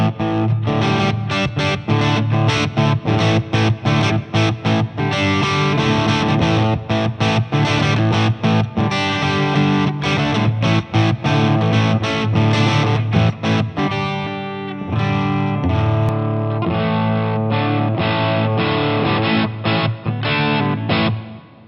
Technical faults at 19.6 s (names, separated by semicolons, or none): input switched to a poorer device